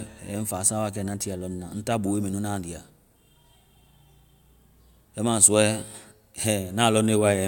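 No technical faults are audible.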